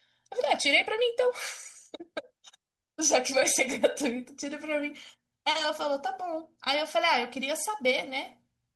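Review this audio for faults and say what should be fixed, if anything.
Channel delay (comb filtering) runs through the whole speech clip. One channel lags the other by roughly 1.5 ms, and the mono sum cancels at evenly spaced frequencies. The first notch sits near 400 Hz. Speech sounds hollow and phasey. Align channels before summing.

A lost packet rebuilt from error correction appears from 5.55 to 5.61 s. About 40 ms of speech comes from low-bitrate in-band copies, which fits two lost packets. There is no gap, but the stretch sounds rougher and noisier. Reduce network loss upstream.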